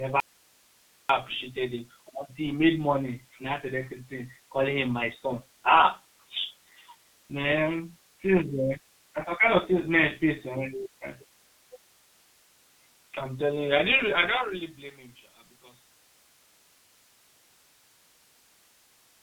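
Speech run through the G.723.1 codec at about 6.3 kbit/s, and it's hit hard: nothing survives above 3.8 kHz, so it comes across muffled and hoarse, with consonants smeared by the codec's long 30 ms frames and slow-moving voice model. Right near the start, from 0.20 to 1.09 s, there's an audio dropout to a faint residue. The signal vanishes abruptly for just under 0.9 s, leaving only hiss sitting roughly 35 dB below the speech, which sounds like the source likely lost connection while the rest of the chain stayed live. Then from 13.85 to 14.96 s there's zipper noise as the level drops by around 20 dB. Instead of gliding down, the gain moves in raw increments at a couple of hundred steps a second, and each jump leaves a tiny click that adds up to a buzzy ticking over the fade.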